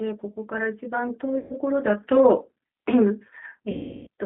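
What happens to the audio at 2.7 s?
At 2.7 s the speech carries G.729 codec damage, which runs through the whole clip. The band is held to roughly 250 Hz to 3.6 kHz. Speech is rebuilt from a vocal tract model and a few pulses, which fits an 8 kbit/s stream. It sounds plainly rough and synthetic.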